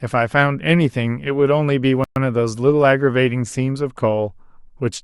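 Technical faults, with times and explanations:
2.04 to 2.16 s, playback stall: the speech cuts out in mid-flow and the output drops to silence for 120 ms before resuming. The gap is a hard hole in the sound rather than a fade, which is what you hear when the player has nothing to send to the output. The likely cause is the player running short of buffered data, or its playback thread being blocked, until it recovered and carried on.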